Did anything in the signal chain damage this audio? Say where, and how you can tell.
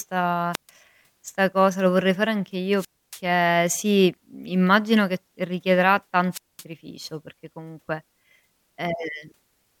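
Yes. There is wireless microphone squelch dropout in the analogue radio link, at 0.53–0.70 s, 2.76–3.21 s and 6.31–6.64 s. Each time, hiss rises as the FM signal fades, and the receiver's squelch then mutes the output for 135, 280 and 216 ms before the speech returns.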